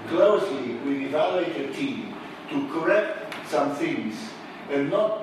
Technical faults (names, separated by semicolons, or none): none